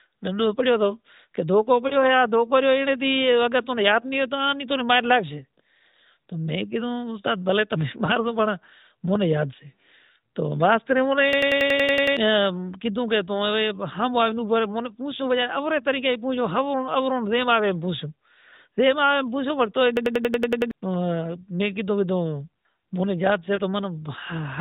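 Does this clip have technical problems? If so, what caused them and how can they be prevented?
Yes. Lost AMR speech frames occur at 1.88 s, just after "پڑیوں توں کہ دھوکو", at 8.06 s, and at 23.56 s after "مونے یاد سے". Each time, a 20 ms frame failed its checksum and the decoder filled in from the previous frame, leaving a brief dip or warble. Prevent this with stronger channel coding or a better radio link.

A system hang loop occurs from 11.33 to 12.17 s and again from 19.97 to 20.71 s. The computer stalled while the sound hardware kept replaying its buffer, so a 93 ms piece stutters at 10.8 Hz, nine and eight times respectively, which fits a 4096-sample buffer. Prevent this by fixing the driver or system stall.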